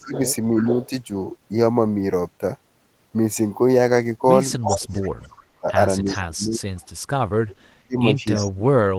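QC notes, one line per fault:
0.0–0.66 s, 4.66–6.66 s and 7.43 s to the end: speech suppressed in double talk. The echo canceller likely could not tell the near talker from loudspeaker echo while both sides spoke, so it attenuated everything. The speech dips in short pieces, about 15 dB at the start over roughly 150 ms. It then drops hard, about 35 dB across roughly 1.5 s, and about 40 dB in the closing stretch.
0.12–0.9 s, 4.62–5.26 s, 6.06–6.87 s and 8.34–8.51 s: echo leak. A far-end loudspeaker's pickup likely slipped past its echo canceller and was sent back, so a copy of the speech returns 0.32 s late each time. It sits about 15 dB below the speech in the first and third spans, about 10 dB below in the last, and only about 5 dB below at 4.62 s.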